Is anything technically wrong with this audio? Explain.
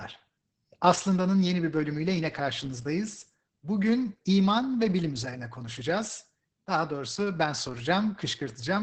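Yes. Throughout the speech the audio has been through Opus voice compression at a very low rate, which fits a bitrate near 10 kbps. The codec is running its SILK linear-prediction coder alone, with the band limited to wideband, so nothing above about 8 kHz survives, and the excitation is coded coarsely. The damage is heavy: the speech sounds muffled and hoarse, with a slightly robotic edge where fine detail has been replaced by a rough approximation.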